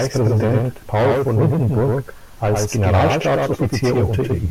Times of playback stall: none

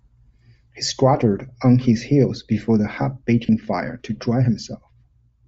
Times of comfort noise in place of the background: none

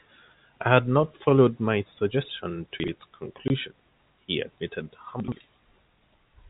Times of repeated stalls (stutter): none

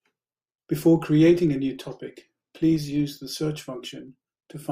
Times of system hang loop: none

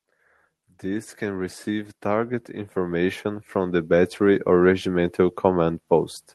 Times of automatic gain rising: 0.57-5.86

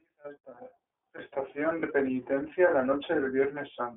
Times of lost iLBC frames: 1.80-1.84

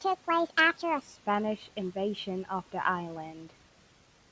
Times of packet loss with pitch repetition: none

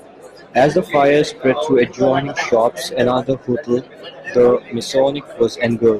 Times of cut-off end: none

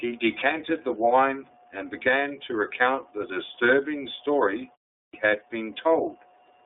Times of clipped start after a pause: 5.04-5.13

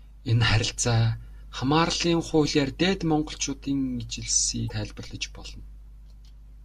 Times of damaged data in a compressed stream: 4.67-4.71

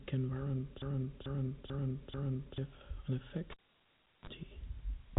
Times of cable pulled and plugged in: 3.51-4.29

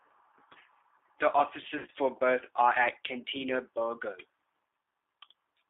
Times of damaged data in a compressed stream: none

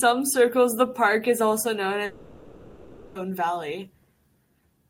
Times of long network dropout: 2.05-3.17

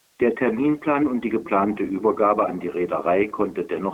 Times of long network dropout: none

